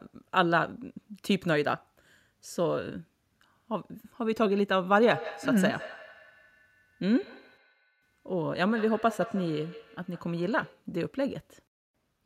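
A second device in the same room plays back what the first device's microphone sent, and that microphone picks it up again. Each echo canceller removes only its own device's playback, so this recording of speech carries feedback echo between two devices from 4.99 s to 10.9 s. Each stretch of speech comes round again at a fixed interval of roughly 150 ms, sounding thinner and more ringing, with the repeats peaking at about 16 dB below the speech.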